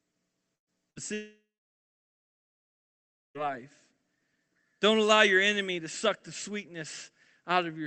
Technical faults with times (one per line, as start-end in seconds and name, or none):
0.55-0.99 burst of packet loss
1.14-3.38 long network dropout